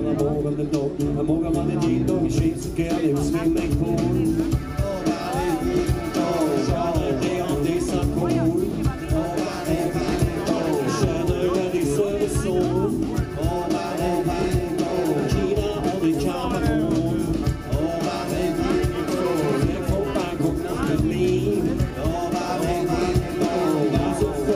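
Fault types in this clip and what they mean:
Dropped samples: Four isolated, sharp clicks, at 14.32, 16.04, 17.76 and 21.90 s, each a single instant with no gap or missing sound around it, and each a thin vertical line across the spectrum. The likely cause is a tiny piece of the stream, well under a millisecond, going missing, so the waveform leaps straight from one value to a later one and that abrupt step is heard as a click.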